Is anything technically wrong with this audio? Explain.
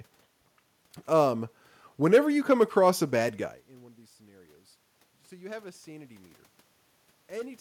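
No, nothing technical is wrong here: the background noise is just the room the microphone was in, and the level shift around 3.5 s is the talker moving relative to the microphone, not the system.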